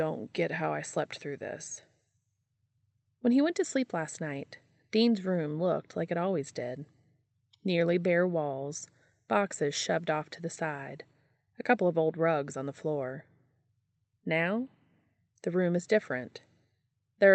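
A speech recording carried over a WebRTC call path, with nothing technically wrong to report.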